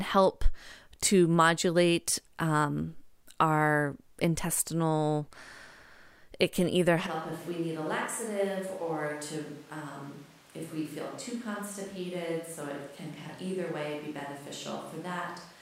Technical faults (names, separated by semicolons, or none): switch to a distant microphone